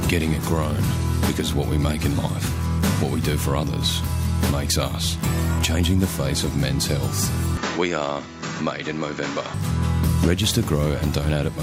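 From 7.57 to 9.54 s the sound dulls, loses everything above 7.6 kHz and drops a little in level, likely an input switched to a poorer device.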